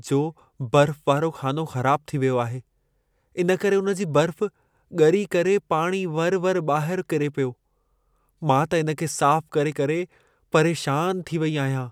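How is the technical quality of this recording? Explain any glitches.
Listening to the recording, nothing stood out as a technical problem.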